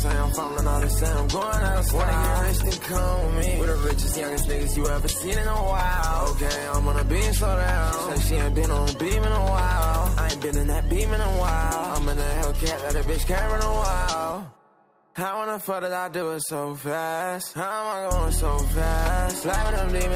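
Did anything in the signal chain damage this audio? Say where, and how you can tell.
Yes. From 0.61 s to 7.21 s a call bitrate drop degrades the audio at the codec stage. The encoder rate falls from 48 to 16 kbps, bottoming out for about 4.8 s, giving coarse, muffled sound with lost highs. Unlike packet loss, there are no gaps or glitches.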